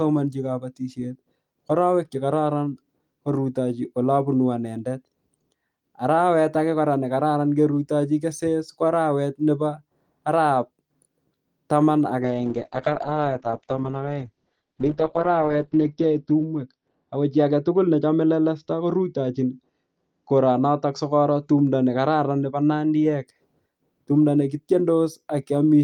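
A call bitrate drop runs from 12.23 s to 23.31 s. As the bandwidth estimate fell, the encoder went from 32 to 8 kbps, staying lowest for about 3.5 s, and narrowed its bandwidth from 20 kHz to 6 kHz, leaving the speech muffled, rough and watery.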